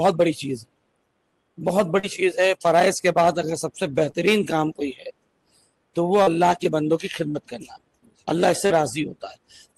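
Short concealed packet loss strikes four times, at 1.99, 4.11, 6.22 and 7.31 s: each time about 40 ms of audio arrived too late, and the decoder extended the preceding sound before blending back. Each is heard as a brief smear or wobble. A spectrogram shows smooth, repeated harmonics or blurred noise spanning roughly 40 ms, then a blended return of detail.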